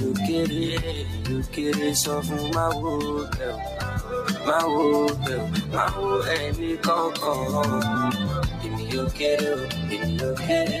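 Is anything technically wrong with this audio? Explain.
Yes. A noise suppressor applied to music or sounds runs throughout. It was designed for speech, so it treats steady tones, ambience and decay as noise. It keeps turning them down, and the level swings by roughly 5 dB, giving a pumping, thinned sound.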